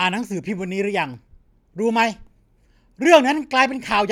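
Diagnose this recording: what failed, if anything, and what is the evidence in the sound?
Nothing failed in this recording, and the sound gives no evidence of any fault at any stage.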